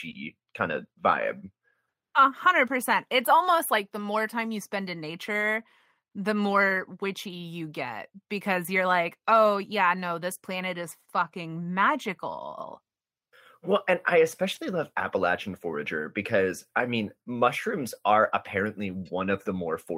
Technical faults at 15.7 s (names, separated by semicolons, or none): none